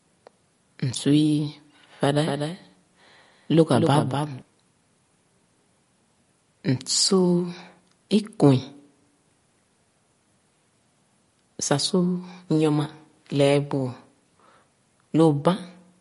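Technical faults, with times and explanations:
Throughout, MP3 compression: there's clear codec damage, with the top end cut flat at 11.2 kHz and a watery, swirly edge where weak frequency lines drop in and out between frames. That's likely a low-bitrate MP3 encode, pointing to around 48 kbps.
2.26 to 4.42 s, doubled audio track: a second full-band copy sits about a fifth of a second behind, maybe 5 dB quieter, starting and stopping abruptly with no room tail. Most likely the same audio got captured twice via a slower path.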